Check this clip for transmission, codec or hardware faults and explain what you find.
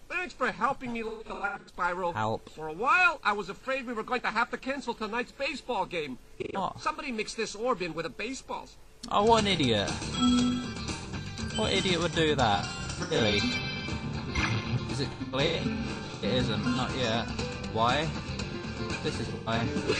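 Two kinds of fault appear: repeated AAC frame loss with concealment, and de-emphasis applied wrongly over the final stretch.

AAC frame loss with concealment: Smeared, noisy, phasey patches appear at 1.08–1.74 s, 6.42–6.57 s, 12.56–13.34 s, 15.11–16.24 s and 19.25–19.61 s. Lost frames were patched from the last good spectrum, with gaps of roughly 0.1–0.15 s at worst.

De-emphasis applied wrongly: From 13.58 s to the end, the sound turns dull and muffled, sloping down to about 11 dB lower at 10 kHz than at 1 kHz. A treble cut was applied where no pre-emphasis existed, or was applied a second time.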